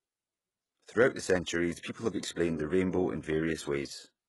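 Throughout, the speech has gritty, lispy s sounds and nothing above 11.5 kHz, likely heavy HE-AAC compression faking the treble from copied lower bands.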